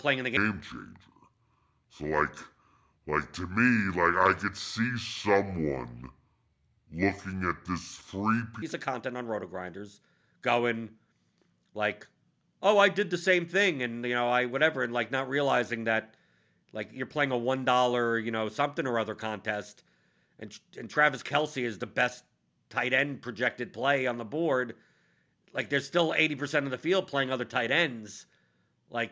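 Speech clip with a wrong sample rate from 0.37 to 8.62 s, between "in the" and "of content on". The audio runs at two-thirds speed and drops about 7 semitones together, which fits 24 kHz audio played at 16 kHz. A pitch shifter would keep the pace.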